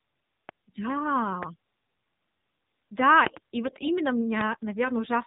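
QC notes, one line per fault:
throughout: AMR narrowband mobile codec. Buzzy, synthetic, band-limited speech with nothing above 4 kHz. The pulse-driven vocal-tract model at a low rate, plausibly the 7.4 kbps mode, plainly damages the sound.
0.49, 1.43, 3.27 to 3.39: loud pop. Sharp pops around 20 dB above the speech, single at the first two times and a quick double at the third, with speech continuing underneath. These are likely voltage steps from a plug, switch or static.
3.64 to 3.96: AMR bit errors. Speech holds pitch and level but turns hoarse, scratchy and gargly. Flipped low-priority bits, a few percent of them, misplace the excitation pulses and skew the gain and spectrum values.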